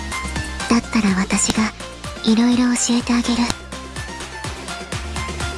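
At 1.50 s and 3.50 s, sharp snaps cut through the sound. These are file headers played as audio: header bytes from pieces joined every 2 s.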